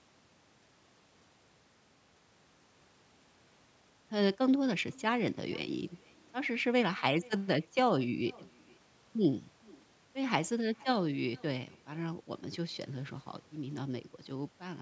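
Throughout the speech, an echo with no canceller returns each phrase about half a second later at about 27 dB down; unlike room reverb, it is a distinct, delayed copy.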